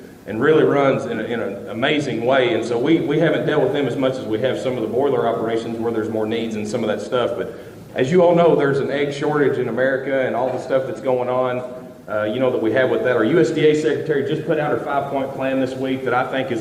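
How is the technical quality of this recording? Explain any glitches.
No glitches can be heard anywhere in the recording. There is nothing in it that needs explaining.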